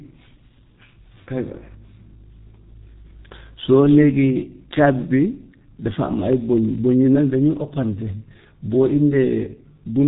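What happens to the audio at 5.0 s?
At 5.0 s the speech carries the same G.723.1 codec damage heard throughout the clip. Nothing above 3.8 kHz survives, and the slow-updating voice model leaves heavy hoarseness and smeared consonants. The dull, rough texture fits a bitrate of about 6.3 kbit/s.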